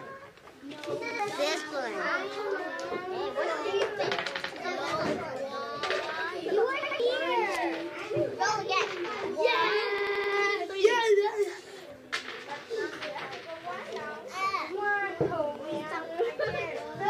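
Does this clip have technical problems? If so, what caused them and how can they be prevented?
Yes. Repeated buffer: new audio arrived late, so the device replayed its last 85 ms block, which fits a 4096-sample buffer. Each repeat is a hard-edged stutter, at 1.11 to 1.20 s and 4.44 to 4.52 s, at 6.83 to 7.00 s (heard three times), and at 9.98 to 10.33 s (heard five times). A larger output buffer or higher priority for the audio thread would keep data arriving on time.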